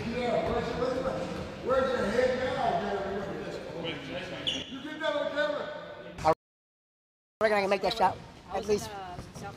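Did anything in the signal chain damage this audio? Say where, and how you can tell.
Yes, at the playback stage. A playback stall cuts the sound off mid-flow at 6.33 s and leaves silence until 7.41 s, 1.08 s in all. The waveform drops to a flat line and the spectrogram shows a blank band. The player likely ran dry or had its thread blocked.

Catch-up at higher speed follows, also in playback. From 7.41 s to the end, the player resamples its backlog, so the sound runs at 1.25 times normal speed and sits roughly four semitones high. On the spectrogram every component shifts upward, and in the waveform events crowd closer together.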